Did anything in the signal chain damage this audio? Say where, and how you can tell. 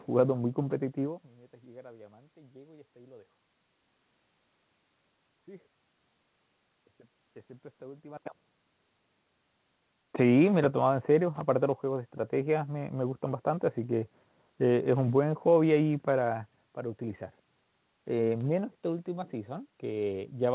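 No, nothing in the chain damaged it: the room noise belongs to the recording, the level shifts near 1 s and 8 s are the talker moving relative to the microphone, and the band stopping at 4 kHz is simply the narrowband G.711 A-law call path doing its job.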